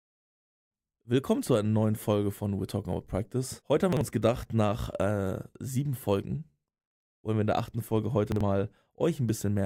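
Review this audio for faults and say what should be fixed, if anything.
There are two spots where chunks out of order garble the speech, at 3.93 to 4.01 s, just before "uns gedacht nach äh", and again at 8.32 to 8.41 s. In each, a block of about 43 ms plays one chunk late, swapped with its neighbour. Nothing goes missing, but the three hard joins give a jumbled flicker. To prevent it, have the receiver reorder chunks by sequence number before writing them out.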